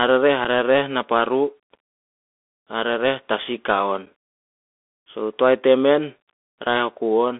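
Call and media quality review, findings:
Bluetooth CVSD headset codec, throughout. Band limited to roughly 250 Hz–3.5 kHz, consistent with a 64 kbps CVSD link. Plainly audible codec damage: one-bit up/down delta coding with an adaptive step lags fast loud highs, giving scratchy sibilants and granular hiss under the speech.

Unconcealed Bluetooth headset packet loss at 0.45 s and 4.06 s. Each is a hard-edged dropout of about 7.5 ms, likely a single lost headset packet replaced by silence rather than concealed. Abrupt edges leave a brief gap, with a momentarily quieter restart as CVSD re-adapts.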